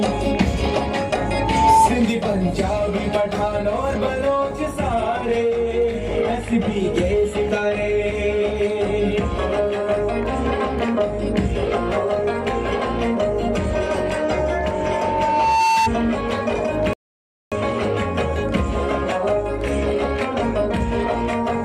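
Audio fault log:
1.24 to 1.89 s, loudspeaker feedback squeal: the microphone picks up its own loudspeaker, and the loop runs away at 893 Hz, a tone that swells within about half a second to roughly 10 dB above the sound.
14.36 to 15.92 s, loudspeaker feedback squeal: the same 893 Hz loop builds up again, more slowly, over about a second and a half, peaking near 5 dB above the sound.
16.93 to 17.52 s, rebuffering stall: the player runs out of downloaded audio and waits, so the sound drops to silence for 0.58 s and then resumes exactly where it stopped.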